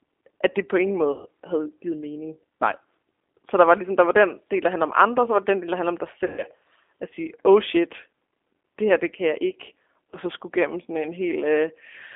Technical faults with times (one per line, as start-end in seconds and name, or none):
0.00-12.15 G.729 codec
1.12-1.28 VoIP packet loss concealed by the speech codec
6.26-6.43 VoIP packet loss concealed by the speech codec
10.11-10.17 VoIP packet loss concealed by the speech codec